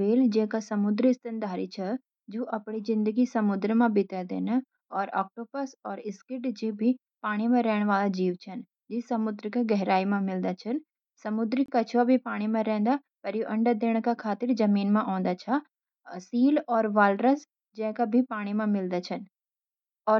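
At 11.66 s the speech drops out for about 24 ms, a clean hole with abrupt edges on both sides. This is a gap between stream segments: two segment timestamps failed to meet, likely at a 6-second segment boundary, and the player padded the missing stretch with silence.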